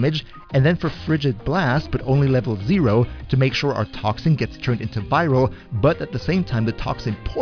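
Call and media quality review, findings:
No faults found in the review of this clip. No action needed on the call or media path.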